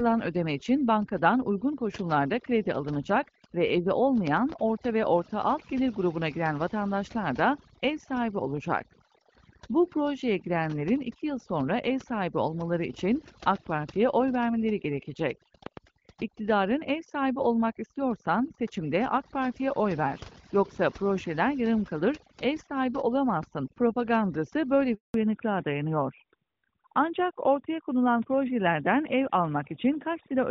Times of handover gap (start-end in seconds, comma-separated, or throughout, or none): 24.94-25.14